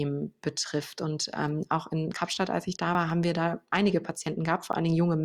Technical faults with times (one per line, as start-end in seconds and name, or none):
2.95 dropped buffer (overrun)
4.73 dropped buffer (overrun)